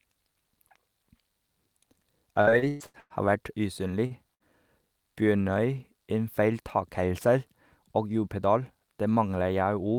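Choppy speech from 2.41 to 3.13 s is repeated packet loss (robotic sound): five separate gaps, the longest 119 ms, were each patched by extending the preceding sound, so about 54% of that stretch is synthetic fill and roughly 180 ms of speech is gone. At 4.06 to 4.13 s one sound is held about 39 ms too long, then picks up exactly where it left off. That is a short stall from a late packet: the jitter buffer ran dry, playback was stretched until the packet arrived, and the delay grew by 39 ms with nothing lost. Soon after, at 4.34 to 4.43 s, a held, fading sound of about 59 ms replaces the audio, and the speech resumes roughly 60 ms further on. This burst of packet loss left a hole the receiver covered by continuing and lowering the last sound. From 7.80 to 8.95 s the speech sounds hurried but keeps its pitch, running at about 108% speed. This is a jitter buffer speed-up, where the receiver trimmed many pitch-period-sized pieces, around a tenth of a second in total, to drain excess buffered delay.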